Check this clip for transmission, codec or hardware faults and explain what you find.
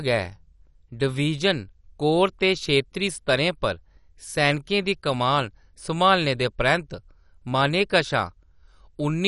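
One fault runs through the whole speech recording. It sounds like MP2 compression, most likely at a low bitrate around 48 kbps: speech sounds dull and gurgling as upper sub-bands starve of bits, and spectrograms show nothing above 11.3 kHz, with flickering, blocky bands below.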